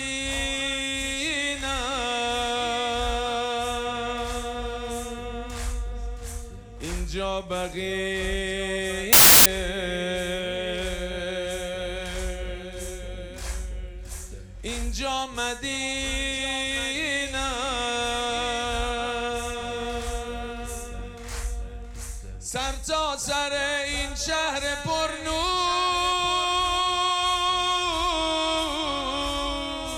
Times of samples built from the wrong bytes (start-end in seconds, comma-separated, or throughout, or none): 9.13-9.46